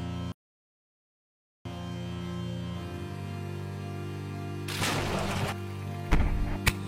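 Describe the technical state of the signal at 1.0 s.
At 1.0 s the signal sits inside an audio dropout to silence that runs from 0.32 s to 1.65 s, about 1.33 s of sound lost outright. The output is silent, with no room tone or noise floor underneath. On a waveform this shows as a flat line that cuts off abruptly and resumes just as abruptly. A spectrogram shows a dark vertical band. The likely cause is a lost input, such as a disconnected device, a broken link or an accidental mute, while the encoder kept writing silence.

The same moment also falls within the opening low-bitrate stretch of an adaptive stream, which lasts from the start to 5.38 s. The player began on a lean rendition so that playback could start quickly, and it switched to a better one once it had gauged the connection. Either side of the gap, the sound is dull and artefact-prone, and the treble is missing or synthesised. 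This is consistent with HE-AAC at around 32 kbit/s. On a spectrogram the upper band looks smeared or patchy until 5.38 s. There the full top end fills in at once, with no break in the waveform, which suggests a step up to AAC-LC at around 96 kbit/s.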